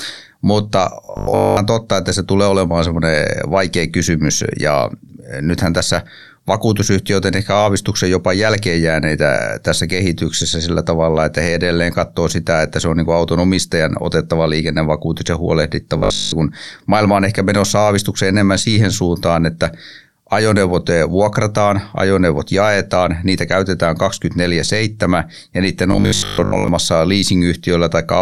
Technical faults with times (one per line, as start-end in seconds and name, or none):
1.05-1.57 robotic sound from repeated short buffers
15.98-16.32 robotic sound from repeated short buffers
25.92-26.68 robotic sound from repeated short buffers